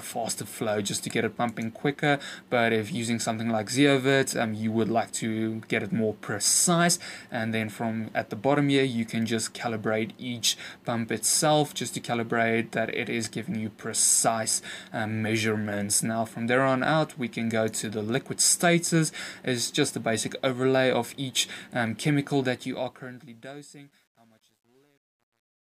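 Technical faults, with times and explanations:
22.48–25.64 s, truncation distortion on a fade: as the fade-out drops, the level is cut to too few bits with no dither, which fits about 10-bit resolution, so from 23.24 s the waveform collapses into coarse steps and the tail turns gritty.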